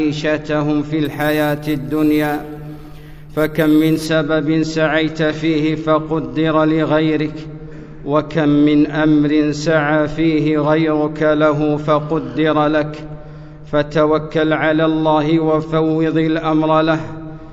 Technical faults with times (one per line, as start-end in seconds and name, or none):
1.05-4.06 imaging from sample-and-hold upsampling